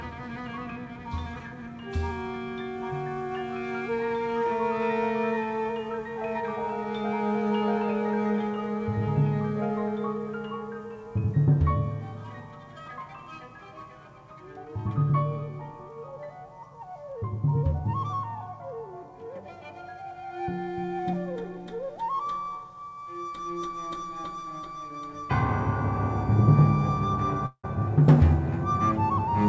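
From 27.46 to 27.65 s the sound breaks off. The last sound carries on as a fading buzz or hiss for about 175 ms, with 70 ms of silence, and then returns with about 180 ms missing. This is likely a long network dropout concealed by the receiver. Nothing above 8 kHz is present, consistent with the G.722 call path.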